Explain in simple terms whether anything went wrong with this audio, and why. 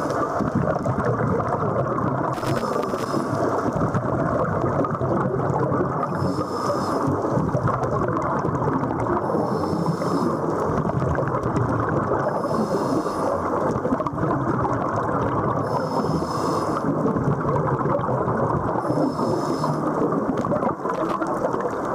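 A worn or dirty contact in a cable or plug kept losing and regaining connection, causing loose connector crackle: the sound is chopped into an irregular burst of crackling or scratching from 2.34 to 3.06 s, and again from 20.95 to 21.17 s.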